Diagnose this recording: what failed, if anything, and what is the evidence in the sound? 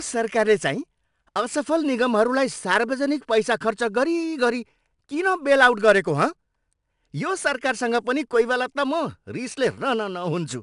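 The codec stage is where this went wrong: it's 4-bit ADPCM compression, and the damage is plainly audible across the whole speech clip. Every louder stretch carries a gritty hiss that rises and falls with the level, and sharp onsets get roughed up where the adaptive step can't grow fast enough to follow them. Nothing comes through above 10.6 kHz, which fits roughly a 22 kHz sample rate, and the data rate points to about 89 kbps.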